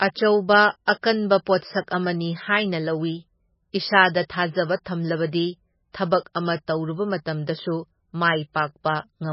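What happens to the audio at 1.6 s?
A pre-echo runs from 1.58 to 1.62 s: a short hiss spreads about 45 ms ahead of a sharp speech onset, because the codec smeared quantisation noise across its whole transform block. Throughout this moment the speech is band-limited, with nothing above 5.6 kHz, and sounds watery and swirly, which points to heavy MP3 compression at a bitrate near 16.7 kbps as the likely cause.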